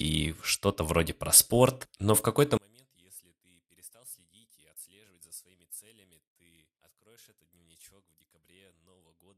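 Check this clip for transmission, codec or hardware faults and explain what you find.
One fault is audible. From 2.57 s to the end, the speech drops by about 30 dB and turns faint. The likely cause is one channel inverted: one stereo side carries reversed polarity, so when the two sides are summed to mono, everything they share cancels. A centred voice is almost entirely common material, so it nearly disappears, leaving only a faint residue from whatever small differences existed between the channels.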